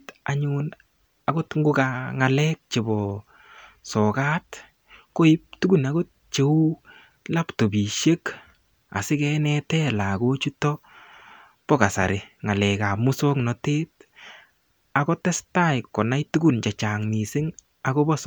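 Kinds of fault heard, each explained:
No technical faults detected in this speech recording.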